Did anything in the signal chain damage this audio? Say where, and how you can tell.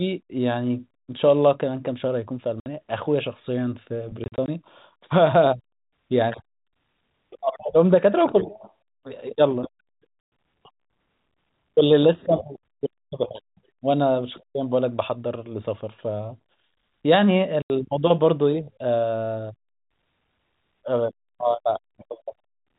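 Yes, at the network stage: packet loss filled with silence. Hard-edged gaps appear at 2.6 to 2.66 s, scattered through 4.24 to 4.48 s, at 10.24 s, and at 17.62 to 17.7 s. The gaps fall in steps that fit 20 ms packets.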